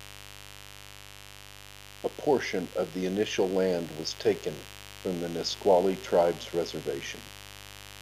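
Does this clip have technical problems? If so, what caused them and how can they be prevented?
Yes, there's mains buzz running through the whole clip, a raspy hum built on 50 Hz sitting roughly 20 dB under the speech. Spiky switching from a dimmer, rectifier or poor shielding is pushing harmonics well into the kilohertz range. Keep cables shielded and away from dimmers and power supplies.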